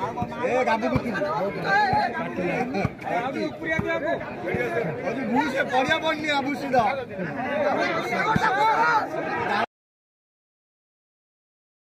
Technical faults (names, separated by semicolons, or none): audio dropout to silence